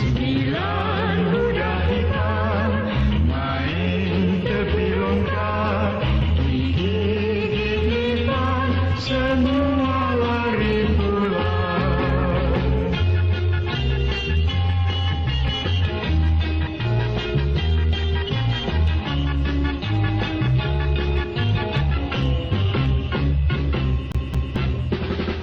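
At 24.12 s the audio catches on a CD stuck on one turn. A scratch knocks the laser back one track each time the disc comes round. The same 220 ms slice of sound plays twice in a row. A brief mute marks each jump back. The result is a quick, even stutter, the familiar hiccup of a skipping disc. It clears at 24.56 s, and playback moves on.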